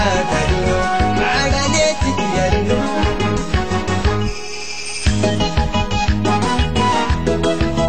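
From start to finish a video or display buzz sits under the sound, a coarse hum at 75 Hz with a gritty hash layered above it, running roughly 30 dB below the signal. A screen or video cable has coupled into the audio path, injecting interference locked to a 75 Hz field rate. On a spectrogram this appears as a steady line at 75 Hz with evenly spaced harmonics stacked above it and a haze of broadband hash. The waveform shows a small periodic ripple that repeats every 13.3 ms.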